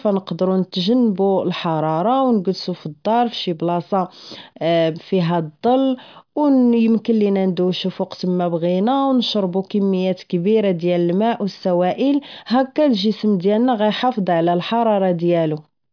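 A speech recording with no audible technical faults.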